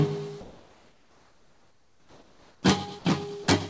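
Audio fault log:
0.41–2.63 s: comfort noise in place of the background. The real background becomes a smooth, featureless hiss about 5 dB quieter, likely from discontinuous transmission; the spectrogram shows a flat, textureless band.
2.99–3.05 s and 3.44–3.47 s: sound dropped by the voice detector. For 60 ms and then 30 ms, sound gives way to steady noise, likely because the detector mistook it for background. Waveform shows brief flattened gaps, with nothing above 8 kHz anywhere.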